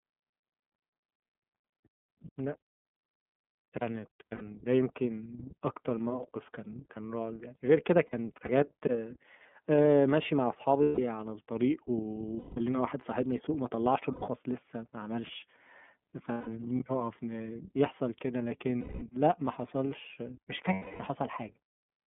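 Speech coded throughout by the iLBC codec, with a 150 Hz to 3.5 kHz line band and clearly audible roughness. Each 30 ms frame's excitation is coded independently, and nothing above about 3.5 kHz survives, and the voice sounds slightly synthetic. Lost iLBC frames occur at 4.20–4.42, 8.07–8.50, 10.82–10.99, 12.38–12.58, 14.13–14.23, 16.32–16.48, 18.80–19.03 and 20.73–21.02 s, with 90 to 270 ms missing in each. The first two losses are scattered, with the longest run around 70 ms. The decoder fills each gap by repeating the last pitch cycle with added noise, which produces a held, buzzy vowel. The voice recovers almost immediately afterwards.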